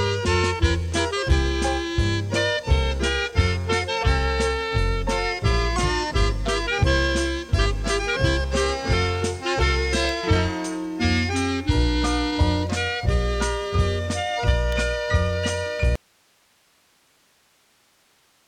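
A nearby switch, motor or static discharge likely arced and coupled a brief burst of energy into the audio line at 10.09 s and again at 14.72 s. Each of these electrical switching spikes is heard as a sharp snap or a tight cluster of clicks sitting on top of the sound rather than replacing it. They are over in a few milliseconds and leave the underlying audio unchanged on either side.

At 15.96 s the wanted signal is likely lost somewhere upstream while the rest of the chain stays powered and live, giving an audio dropout to a faint residue. The sound cuts off abruptly, with no fade, and what remains is only hiss, roughly 40 dB below the earlier level. That hiss continues unbroken through to the end of the clip, with no return of the original sound.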